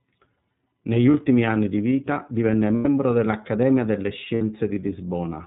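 From start to finish the speech goes through the iLBC codec, and the damage is plainly audible: the voice sounds clear but rough and slightly synthetic. The 30 ms framing fits iLBC's 13.33 kbps mode. Because the codec is narrowband, a spectrogram shows a hard ceiling at 4 kHz with nothing above it. Below that line, the harmonics look grainier and less smooth than in natural speech.

The first lost iLBC frames come at 1.11 s and last 30 ms, just before "anni di vita divenne". The decoder covers the gap by repeating the last pitch cycle mixed with noise, which sounds like a brief buzzy hold on the vowel. The second loss, at 2.76 s just after "anni di vita divenne", lasts 90 ms. Over that longer gap the held, breathy vowel fades.

The third loss, at 4.34 s, lasts 60 ms. In each case the voice snaps back to normal almost at once, because each iLBC frame decodes independently of the one before. 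On a waveform, each gap shows repeated periodic cycles mixed with noise. On a spectrogram, each appears as flat, frozen harmonic stripes with a noisy haze.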